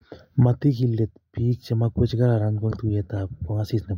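Right after "chemamakwech che kararan", at 2.71 to 2.76 s, compressed frames were skipped. Roughly a tenth of a second of speech vanishes, consistent with around seven 20 ms frames, so the audio jumps ahead.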